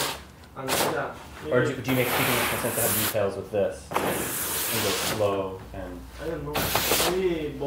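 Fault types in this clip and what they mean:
No technical faults can be heard anywhere in this audio; the signal stays steady and intact throughout, with no audible disturbance to its level, timing or continuity.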